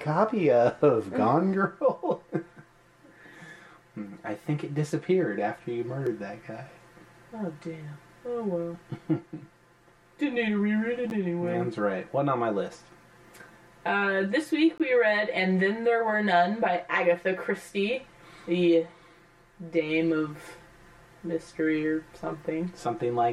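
From 1.54 s to the end, one channel runs roughly 5 ms late and the pair is summed to mono, producing channel delay comb filtering: evenly spaced notches from around 100 Hz leave a hollow, phasey tone. The output buffer probably went unfilled at 6.07 s, 11.10 s and 14.78 s, leaving blocks of digital silence of 1.09, 9.98 and 19.95 ms, heard as a tick, then a dip, then a short hole.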